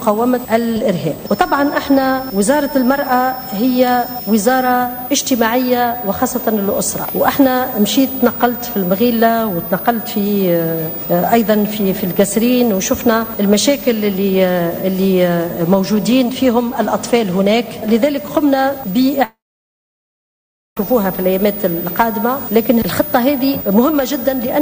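At 19.24 s the sound cuts out and doesn't return until 20.77 s, which is a long network dropout. It's likely that packets stopped arriving and the receiver filled the hole itself: you get a brief buzzy continuation of the last sound that fades quickly, then about 1.4 s of silence. When the audio resumes, it's jumped ahead, so roughly 1.5 s of material is simply gone rather than delayed.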